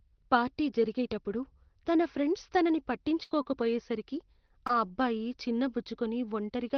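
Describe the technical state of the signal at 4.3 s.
At 4.3 s the signal sits within a stretch of repeated packet loss (robotic sound) running from 3.23 to 4.71 s, between "జరిగేటప్పుడు తన ఫ్రెండ్స్ తనని" and "ఆ అబ్బాయి". Short dropouts, the longest 75 ms, are patched by extending the previous sound, leaving choppy speech with pieces missing.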